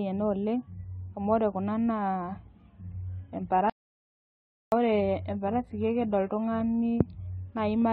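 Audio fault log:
2.83–6.83 s, adaptive stream at a lower bitrate: the quality falls suddenly with no gap. Codec artefacts grow heavier. The sound fits a switch from a 96 kbit/s AAC stream to a 16 kbit/s HE-AAC rendition after the connection slowed.
3.70–4.72 s, audio dropout to silence: about 1.02 s of the speech cuts out mid-flow into silence with no room tone, then resumes. This is likely a lost input with silence still written, and whatever was spoken in that gap is gone.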